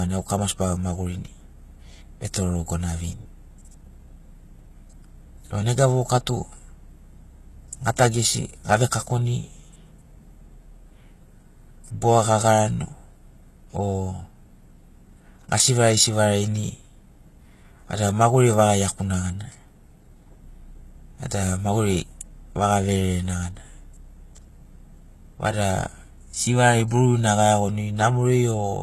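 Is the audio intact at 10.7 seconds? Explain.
No. At 10.7 seconds, as across the whole speech clip, sibilants sound gritty and lispy with nothing above 12.3 kHz, likely HE-AAC compression rebuilding treble from copied lower bands at a very low bitrate.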